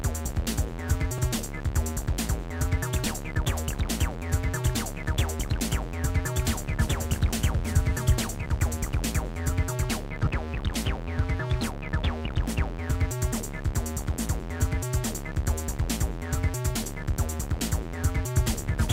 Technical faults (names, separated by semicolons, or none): lost LE Audio frames